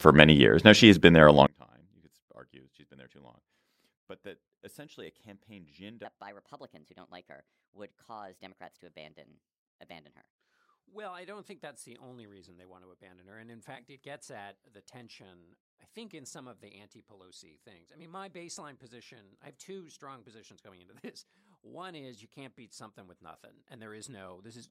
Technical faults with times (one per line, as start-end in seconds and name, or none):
1.47-24.70 one channel inverted
6.05-10.35 section at the wrong speed